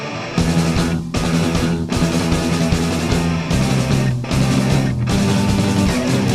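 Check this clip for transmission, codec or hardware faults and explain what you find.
No transmission, codec or hardware faults can be heard anywhere in the clip, and the signal stays continuous and stable throughout.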